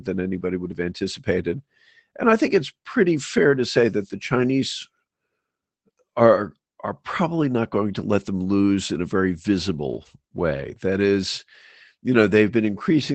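Lost packets rebuilt from error correction occur at 1.57–1.59 s, 2.45–2.47 s just before "it's pretty", 3.33–3.43 s between "it's pretty" and "to say that the", 4.37–4.47 s just after "to say that the", 9.93–10.07 s and 12.11–12.21 s. Each stretch was lost in transit and filled with a low-bitrate backup copy carried in the following packet, so nothing drops out. Instead, 20 ms, 60 ms or 80 ms of speech turns rougher and noisier, which fits one to four lost 20 ms packets. The call path runs at about 8 kHz bandwidth.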